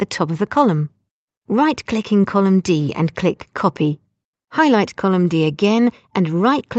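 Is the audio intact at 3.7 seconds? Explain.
Yes, the audio is intact at 3.7 seconds, with no dropout, glitch or other fault at that moment.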